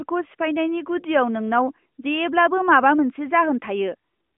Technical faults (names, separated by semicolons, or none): none